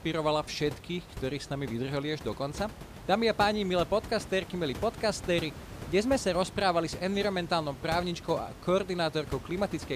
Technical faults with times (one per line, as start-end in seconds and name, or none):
none